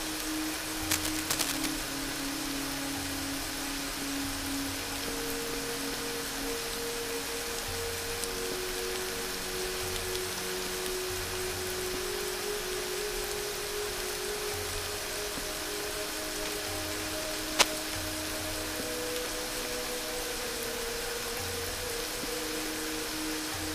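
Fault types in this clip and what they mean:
Cable scratch noise: two stretches of dense, uneven crackle and rustle, from 0.85 to 1.76 s and again from 16.45 to 17.74 s, sitting roughly level with the sound itself. Likely a worn cable or connector being moved, its contact flickering.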